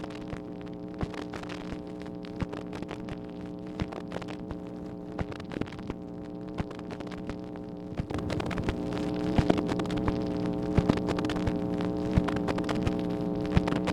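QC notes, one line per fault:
8.13 s to end, sudden gain jump: everything, background noise included, steps up about 9 dB at once, likely a gain change applied with no ramp.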